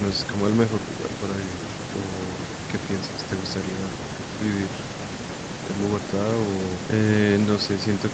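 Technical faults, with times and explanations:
No technical faults heard.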